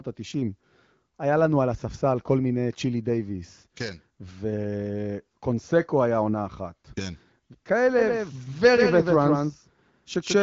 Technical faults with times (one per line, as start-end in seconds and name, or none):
7.99-10.42 doubled audio track